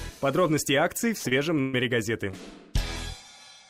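At 1.17 to 1.28 s comes a burst of packet loss. Around 60 ms of audio never arrived, and the receiver extended the last sound for roughly 64 ms, fading it, so a held buzz or dimming hiss sits where the material is missing. Right after, at 1.29 to 1.33 s, a short concealed packet loss fills a 20 ms hole by continuing the preceding sound and cross-fading back, heard as a brief smear. A second burst of packet loss at 1.61 to 1.75 s is longer: 120 ms is gone and fully replaced by a decaying continuation with no silent gap, before the sound resumes further on. A final short concealed packet loss at 2.31 to 2.35 s patches about 20 ms the same way, leaving a quick wobble.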